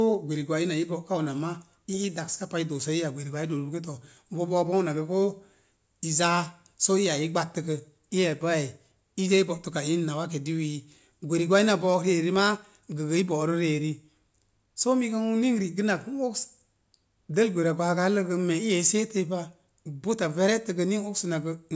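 No dropouts, clicks, distortion or other technical faults are audible anywhere in the speech recording.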